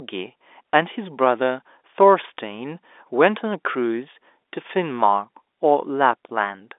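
No faults found in the speech; the narrow band running from about 300 Hz to 3.6 kHz is the normal sound of the G.711 telephone coding path.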